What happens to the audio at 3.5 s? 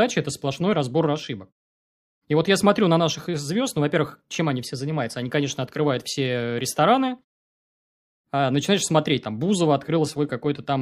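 Nothing goes wrong at 3.5 s: the audio there comes through intact, with no dropout, distortion or other fault.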